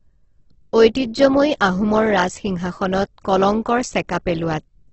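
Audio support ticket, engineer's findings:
Whole clip: speech rough, grainy, noisy on tones, nothing above 8.2 kHz. Likely Opus compression, CELT mode, heavy damage; wideband limit fits a low bitrate around 12 kbps.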